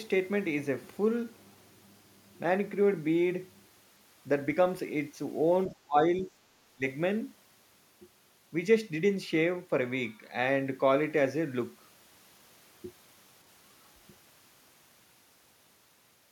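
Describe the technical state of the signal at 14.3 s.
At 14.3 s the speech signal is intact, with no audible technical fault at that moment.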